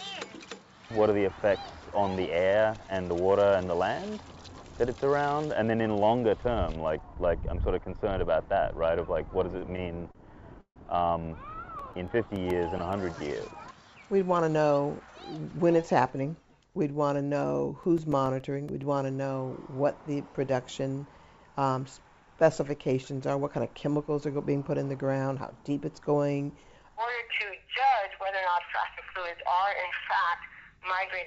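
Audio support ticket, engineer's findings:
Repeated stalls (stutter), 9.58–10.78 s. Four hitches, 240 ms filled in total, longest 152 ms. Jitter buffer ran dry on late packets. Receiver stretched the last sound. Nothing lost, but it drags.

CD scratch ticks, 11.79–13.07 s and 17.41–18.83 s. Ten, then eleven clicks, about eight a second, longest about 5 ms. Disc scratch beyond error correction. Player interpolated or muted once per revolution.

Jitter buffer speed-up, 14.34–15.08 s. Audio runs at 111% speed, pitch unchanged, sounds hurried. Buffer held excess audio. Receiver cut short pitch-period slices, roughly a tenth of a second in all. Call path is G.722 at 64 kbps, with nothing above 8 kHz.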